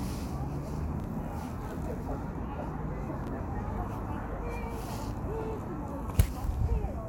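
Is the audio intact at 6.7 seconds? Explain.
Yes, the audio is intact at 6.7 seconds, with no fault present at that moment.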